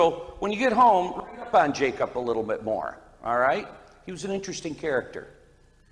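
Listening closely from beginning to end, nothing stood out as a technical problem at any point in the audio.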